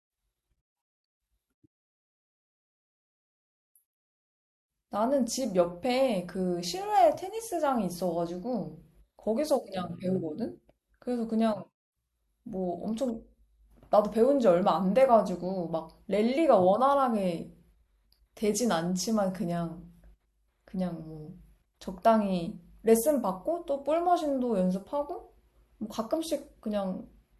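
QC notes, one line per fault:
No faults found in the clip.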